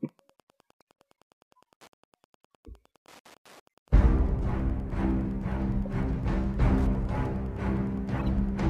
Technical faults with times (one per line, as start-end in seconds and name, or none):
0.00-8.69 Wi-Fi interference
0.81 corrupt frame decoded
8.19-8.22 corrupt frame decoded